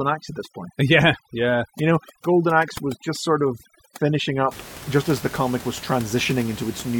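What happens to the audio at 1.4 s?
At 1.4 s you're inside a stretch of overdone noise removal that runs from the start to about 4.51 s, just before "just as the comic". The reducer is clamping bands near its noise estimate too hard, so quiet parts of the speech vanish too. The background drops and breaks up into twinkly specks.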